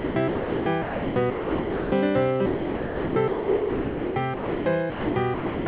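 From 0.00 to 1.92 s and again from 2.46 to 5.66 s, the sound is chopped by the voice detector, likely because of aggressive gating. About 1.5 s and 2.5 s respectively are replaced by flat comfort-noise patches, which show as smooth low-level hiss bands in the spectrogram, all below 4 kHz.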